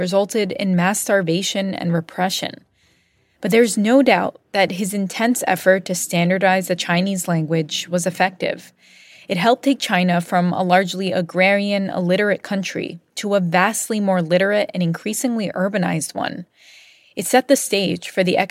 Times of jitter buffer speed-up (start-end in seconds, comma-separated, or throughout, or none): none